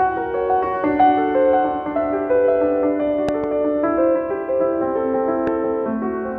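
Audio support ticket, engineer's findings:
Loud pop, 3.29–3.46 s: two pops in quick succession, peak about 10 dB over the programme. Likely a plug, switch or static discharge injecting a voltage step, shaped downstream. Programme continues under it, unlike a dropout. Loud pop, 5.47–5.50 s: single pop, about 5 dB over programme, likely same step-pulse mechanism. Thump sits on top of the audio rather than a digital click's sample-level tick or a gap in the signal.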